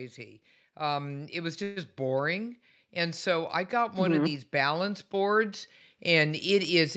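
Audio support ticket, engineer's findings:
Automatic gain rising, 0.05 s through end of clip. Speech and background noise swell together, slowly, no step. Probable component: automatic gain control in the capture chain. Mechanism: AGC judged input level low and kept raising gain over several seconds, so noise floor climbs along with speech. Content already band-limited to about 8 kHz, consistent with a wideband call codec, which doesn't mask the swell.

Call audio freeze, 1.63 to 1.78 s. Last sound sustained as fading buzz or hiss for roughly 0.13 s, then speech resumes where it stopped; nothing dropped, later audio delayed by about 130 ms. Likely cause: late packets emptying the jitter buffer, receiver filling the gap by extending prior audio.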